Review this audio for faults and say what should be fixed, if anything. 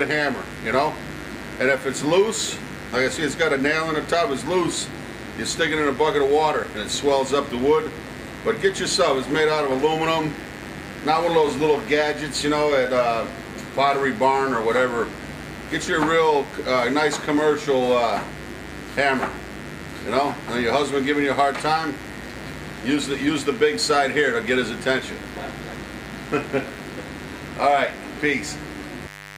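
A dimmer, rectifier or unshielded cable has let sharp switching spikes into the signal path, twice in every cycle of the 50 Hz mains, producing mains buzz that runs from start to finish. Because the spikes are so abrupt, they carry a dense ladder of 50 Hz harmonics reaching up into several kHz. What you hear is a steady, raspy buzz sitting only around 20 dB below the sound itself. To prevent it, keep the recording chain on shielded, balanced cabling, away from dimmers and switching supplies, with a single clean ground.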